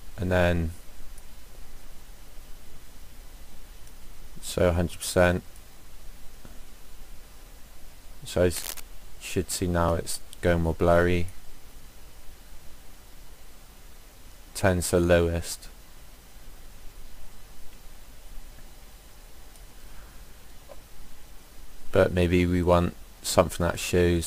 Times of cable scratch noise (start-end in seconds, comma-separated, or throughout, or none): 8.54-8.80